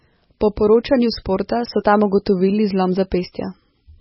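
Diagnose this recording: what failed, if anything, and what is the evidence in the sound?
Codec stage: heavy MP3 compression throughout the speech. Nothing above 5.6 kHz, and a watery, swirling texture fits a bitrate near 17 kbps, likely starving the encoder.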